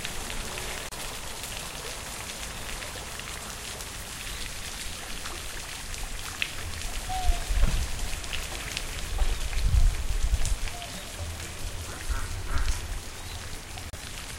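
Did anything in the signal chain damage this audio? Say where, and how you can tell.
Yes. Two silences, at 0.89 to 0.93 s and 13.90 to 13.94 s, point to the wireless link, likely a Bluetooth dropout: late packets were discarded, losing about 30 ms, which fits two frames. The sound resumes further along, whereas a buffer underrun resumes where it stopped.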